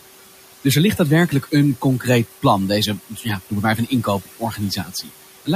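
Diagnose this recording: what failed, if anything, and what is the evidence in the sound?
Noise suppressor artifacts run through the whole clip. This happens at the call-processing stage: the room noise, sitting about 15 dB below the speech, is pulled down by about 17 dB between phrases, then rises back under them as bands switch frame by frame.

Clock drift buffer slips are the likely cause of a regular click heard every 0.62 s from 0.25 s to 5.22 s, around ten in all. This is a driver or buffer fault: two unsynchronised clocks, which fits a mismatch near 500 ppm, force a slip of roughly fifteen samples each time.

Speech cut by the noise suppressor appears at 3.09–3.26 s, 3.77–4.06 s and 4.25–5.10 s, with drops of about 12, 13 and 15 dB. Also at the call-processing stage, the suppressor mistook quiet speech for background, so those stretches sound swallowed and faint, the last one longest.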